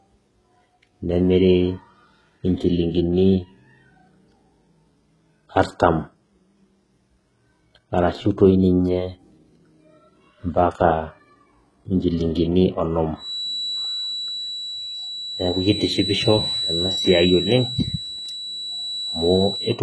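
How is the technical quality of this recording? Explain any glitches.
The technical quality is poor, with heavy codec damage throughout and a tonal fault in the last part of the speech.

HE-AAC compression, throughout: the treble sounds synthetic and nothing is present above 11.5 kHz, which fits a very low bitrate around 12 kbps. The likely cause is HE-AAC coding, which transmits only the lower spectrum and recreates the top by copying lower bands upward under a coarse envelope. Those copied harmonics misalign with the real ones, so s sounds come out gritty, metallic and lispy.

Feedback whistle, from 13.14 s to the end: a thin, steady tone at 3.9 kHz sits roughly 10 dB below the speech, swelling and fading slowly in level. The likely cause is a loudspeaker-to-microphone loop held just at its stability limit, sustaining that single frequency without building into a howl.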